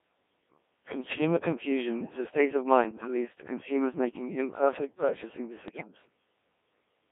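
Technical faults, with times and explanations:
Throughout: Codec 2 vocoder. The speech sounds robotic and buzzy, with the heavy damage you'd expect from something running at about 1.3 kbit/s and squeezed into roughly a 200 Hz to 3.6 kHz band. At that rate the codec keeps only pitch, voicing, loudness and a rough spectral shape, and the decoder rebuilds the voice from sine waves, so none of the original waveform survives and you hear a synthetic stand-in for the talker.
1.09–1.18 s, 2.84–3.08 s and 5.68–5.88 s: bit errors on digital voice radio. The first burst comes just before "confusion is a state" and is a short single-frame glitch. The second sits between "is a state of" and "leads to consumers making" and runs across about five frames. The third follows "consumers making imperfect purchasing" and spans around four frames. The error rate climbs from light to quite high across the three bursts. 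Because every bit in such a lean vocoder controls a whole frame's pitch, level, voicing or spectrum, flipped bits make the voice jump in pitch and tone and break into warbly, bleepy gibberish.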